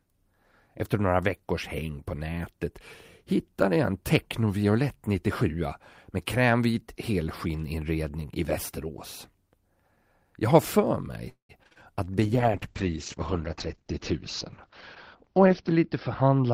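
Right after "har för", from 11.29 to 11.78 s, repeated packet loss leaves four gaps, the longest 197 ms, patched by stretching prior audio into choppy speech with pieces missing. From 12.21 s to the end, a call bitrate drop, consistent with 32 falling to 8 kbps, cuts bandwidth from 20 kHz to 6 kHz, leaving speech muffled and watery.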